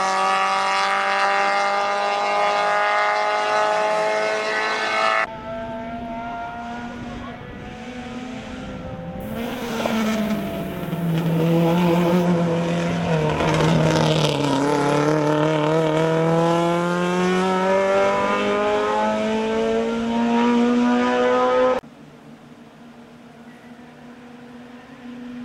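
From 9.20 to 12.24 s, low bit depth with noise shaping: 8-bit rounding error pushed upward, a thin treble-heavy hiss rather than flat, gritty truncation.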